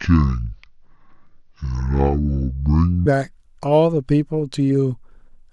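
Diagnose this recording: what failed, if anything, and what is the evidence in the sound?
The opening section, 0.0 to 3.06 s, plays at the wrong speed: the speech runs at 0.584 times its recorded rate, slowed and dragged, with pitch dropping about ten semitones. The fault most likely sits at playback or editing, where this stretch was clocked against the wrong sample rate.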